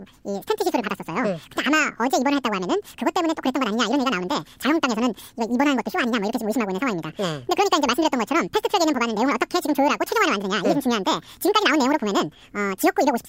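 Throughout the speech, the audio is read two samples at a time (double speed): pairs of samples are taken as one frame, so it plays twice as fast and a full 12 semitones higher. Unlike a pitch shift, tempo and pitch rise together.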